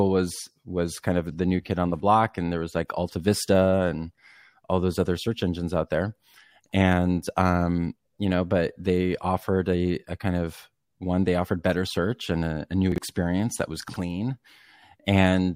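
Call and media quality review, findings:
Chunks out of order, speech, two brief jumbled moments at 12.92–12.98 s and 13.88–13.96 s. Jitter buffer or reassembly: a 20 ms chunk played two, then three, chunk slots late. Nothing dropped, but three hard joins each.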